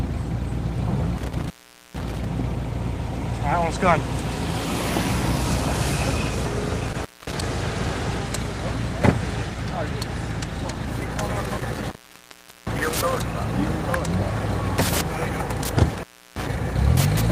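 Intermittent contact at 1.17–2.25 s, 6.88–7.44 s, 11.40–13.18 s and 15.91–16.49 s: a loose plug or cable briefly opens, dropping the sound for 0.45, 0.23, 0.77 and 0.33 s, with crackle at each break and faint hiss while the line is open.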